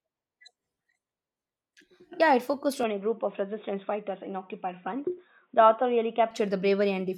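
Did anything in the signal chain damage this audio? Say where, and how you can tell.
Yes. Right after "it focused", at 2.83 s, the speech abruptly turns dull and boxy, with nothing above about 3.8 kHz, and a faint new noise floor appears well below the speech. There is no gap and no obvious level jump. The full band returns at 6.31 s. This points to the capture stage: the input likely switched to a poorer device, such as another microphone or a headset's call profile, whose narrower band and own noise replaced the original path for those seconds.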